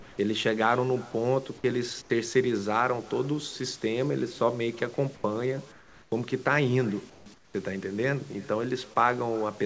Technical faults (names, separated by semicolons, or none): echo with no canceller; comfort noise in place of the background